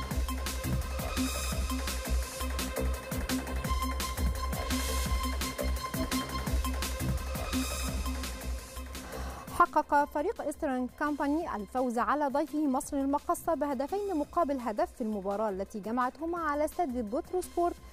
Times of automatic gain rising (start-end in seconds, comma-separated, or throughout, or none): none